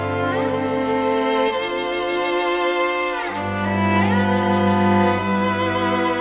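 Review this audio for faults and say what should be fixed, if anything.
Nothing stood out on listening, so there is nothing here that needs fixing.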